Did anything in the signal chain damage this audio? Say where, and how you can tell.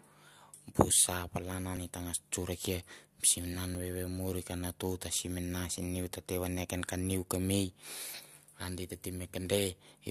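Yes. An overlap between stream segments at the streaming/playback stage shows at 3.75 s as a tiny skip. Overlapping timestamps at a 2.0 s segment boundary made the player trim about 14 ms of real sound, so the waveform jumps with no silent gap, unlike a packet-loss dropout.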